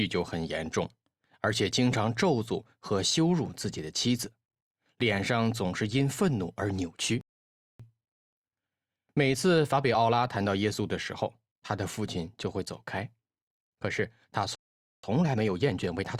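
At 7.21 s the sound cuts out abruptly and stays silent for about 0.58 s, resuming at 7.80 s. The same thing happens again from 14.55 s to 15.03 s, a gap of about 0.48 s. Both breaks are playback stalls. The player likely ran short of buffered data or had its output thread held up, so nothing reached the output until it caught up.

Right after each gap the audio sounds hurried. The pitch stays where it should be. This is time-compressed catch-up. The player is clearing the backlog built up during the stall by dropping short slices and cross-fading the joins. The first stretch runs from 7.80 s to 10.80 s at 1.1 times normal speed. The second, from 15.03 s to the end of the clip, runs faster at 1.25 times and sounds more noticeably rushed.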